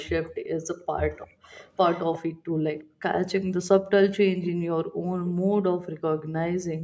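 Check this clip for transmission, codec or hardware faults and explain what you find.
Two faults are present: a returning echo and repeated dips in the room background.

Echo leak runs from 0.00 to 2.18 s and returns briefly at 2.79 to 2.84 s and 4.42 to 4.51 s. A delayed copy of the speech follows the original by 353 ms. It is likely caused by a far-end loudspeaker whose sound reached that side's microphone and slipped past its echo canceller. The copy sits roughly 20 dB down in the first stretch, about 35 dB down at 2.8 s, and is strongest at 4.4 s, only about 10 dB below the speech.

Background gated by the echo canceller appears at 0.33 to 0.47 s, 1.32 to 1.39 s, 2.34 to 3.02 s, 4.85 to 5.04 s and 6.20 to 6.32 s. The canceller sharply attenuated the microphone while it judged the loudspeaker to be active. The room sound drops by about 40 dB at 0.4 s, about 30 dB at 1.35 s and about 39 dB in the later gaps, then returns. 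Most dips last well under a fifth of a second, and the longest affects around 300 ms within the 2.34 to 3.02 s span. The audio's top end stops at 8 kHz, consistent with the call's microphone processing.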